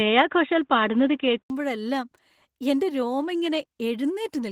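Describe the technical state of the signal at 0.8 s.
At 0.8 s two faults overlap. The first is a switch to a poorer input device, which runs from the start of the clip to 1.5 s. A narrower-band microphone or a headset call profile is the likely cause. Nothing comes through above 3.8 kHz, so the speech sounds dull and boxy, with a faint noise floor of its own far below the signal. At 1.5 s an 80 ms silence marks the switch back, and the level and tone jump by a few decibels. That abrupt change at a single moment sets it apart from a codec narrowing its band, which would not bring a gap or a new tone colour.

The second is Opus voice compression, which is present across the whole clip and so also at 0.8 s. The coder works in hybrid mode: a linear-prediction layer handles the lower band and a transform layer sits above 8 kHz. The excitation is coded coarsely, which fits a low rate of about 16 kbps in 20 ms frames. 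The result is plainly hoarse, slightly robotic speech. Unlike the device fault, it does not change at 1.5 s.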